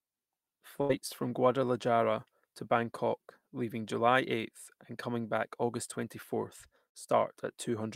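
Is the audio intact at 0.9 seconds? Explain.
No. A burst of packet loss runs from 0.81 to 0.91 s: several packets never arrived in time, so the receiver stretched the last sound for about 77 ms, fading it, and the speech resumes with roughly 80 ms missing.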